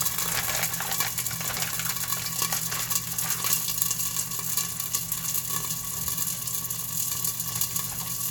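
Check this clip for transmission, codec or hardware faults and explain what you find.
Nothing in the audio points to a transmission, codec or hardware problem.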